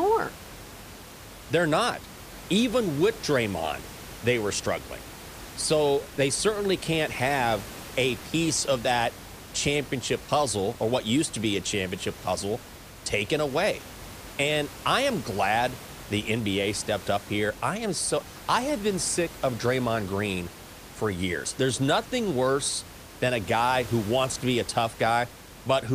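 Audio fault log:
Nothing stood out on listening, with only the room's own background noise audible about 17 dB below the speech.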